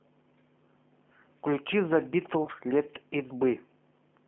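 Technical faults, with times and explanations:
Throughout: G.729 codec. The audio is confined to a telephone band of about 200 Hz to 3.4 kHz, and the codec damage is plainly audible. The sound has the slightly rough, synthetic texture of a decoder that rebuilds speech from a vocal tract filter, a pitch predictor and a handful of pulses per frame rather than from the waveform itself, which fits an 8 kbit/s G.729A stream.
2.45–2.49 s: VoIP packet loss concealed by the speech codec. A gap of about 20 ms, which fits a single lost packet, is filled by the decoder extending its last pitch and filter settings with falling gain, so the sound is briefly stretched into a fading buzzy tone or coloured noise instead of dropping out. Because each frame depends on the previous one, the speech stays weak or distorted just after 2.49 s as the decoder recovers.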